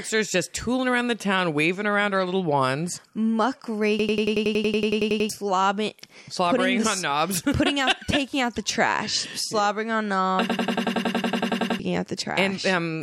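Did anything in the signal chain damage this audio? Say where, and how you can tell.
Yes. From 3.99 to 5.29 s and 10.50 to 11.80 s, the audio turns into a machine-gun stutter, one 93 ms fragment repeating 10.8 times a second. This system hang loop happened at the driver or buffer stage. The host froze while the hardware kept replaying a ring buffer that fits 4096 samples, and roughly 1.5 s went missing each time.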